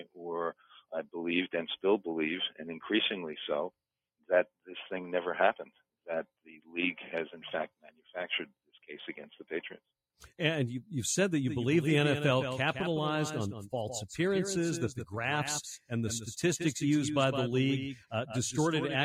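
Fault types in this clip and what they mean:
Sound cut by the noise suppressor: The suppressor mistook brief stretches for noise. The level dips by about 19 dB near 0.6 s and 7.7 s.
Doubled audio track: From 11.5 s to the end, a copy trails about 150 ms behind, roughly 10 dB quieter. It was likely captured twice through a slower path.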